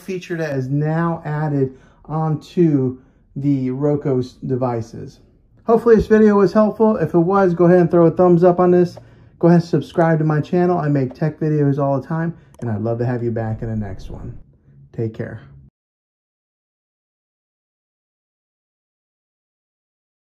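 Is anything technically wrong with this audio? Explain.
Yes. From 0.52 s to the end, the audio shows de-emphasis applied wrongly. A high-frequency roll-off meant to reverse pre-emphasis has been applied where no matching boost exists, so the treble is cut rather than restored. The response falls smoothly with frequency, reaching about 11 dB down at 10 kHz relative to 1 kHz. The result is a dull, muffled sound, with the top end and crispness pulled back for the rest of the clip.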